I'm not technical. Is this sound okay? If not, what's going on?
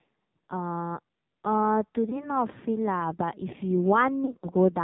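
No, it isn't. The whole clip went through the AMR narrowband mobile codec, the old phone-network speech format, squeezed hard. Everything above 4 kHz is gone, so the voice sounds muffled and telephone-like, with a buzzy, robotic edge.

There are also lost AMR speech frames, moments where a chunk of sound didn't arrive and the decoder guessed by stretching what came before. Around 2.1 to 2.3 s there's one brief glitch. From about 4.26 to 4.52 s a few short separate dropouts make the voice wobble.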